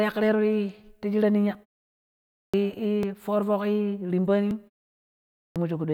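At 2.29 s, after a pause of about 0.72 s, the speech resumes with a clipped start after a pause: roughly 0.25 s is swallowed, so the first sounds are missing and the speech jumps in abruptly. The same happens at 5.31 s, after a 0.7 s pause, losing about 0.25 s. The output device has gone to sleep during the silence and needs that time to wake again. On a waveform, each resumption begins at full level with no onset; a spectrogram shows a hard vertical edge.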